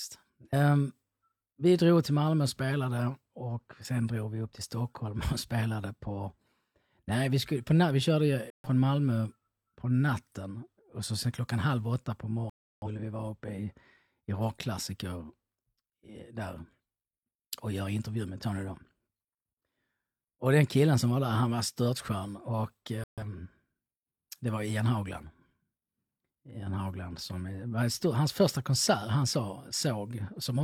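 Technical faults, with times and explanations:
8.50–23.23 s, corrupt frame muted: the decoder rejected compressed frames whose bits had been damaged, and the player put silence in their place. Speech cuts off abruptly at 8.50 s for 0.18 s after "vi skulle på vi", at 12.50 s for 0.38 s between "klockan halv åtta på" and "vi vara", and at 23.04 s for 0.19 s after "han var störtskön och". Each hole spans several whole frames, and the timing afterwards stays in place.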